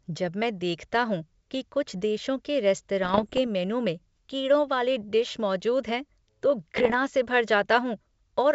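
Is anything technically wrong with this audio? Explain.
Yes: bit errors on an ADPCM link at 3.04 to 3.39 s and 6.76 to 6.97 s. Flipped bits throw off the decoder's step size and predictor, causing pops and rough bursts rather than the silent gaps of packet loss.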